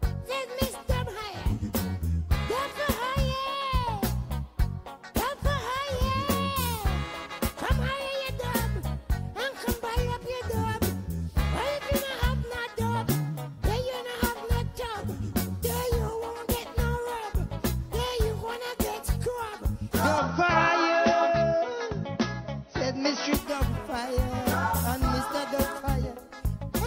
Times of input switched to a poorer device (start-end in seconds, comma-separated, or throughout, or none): 20.18-23.34